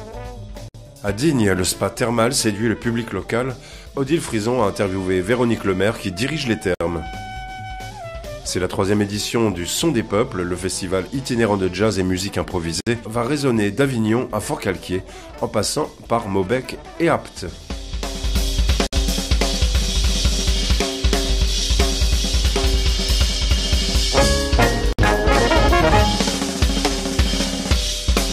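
At 0.68, 6.75, 12.81, 18.87 and 24.93 s, the sound drops out for about 60 ms, every 6 s. Each is a gap at a join of encoded pieces: encoder start delay and last-frame padding were left in. Edges are smeared by the codec, then the sound resumes.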